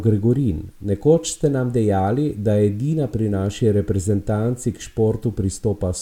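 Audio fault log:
No faults can be heard in this speech recording. There is nothing to log.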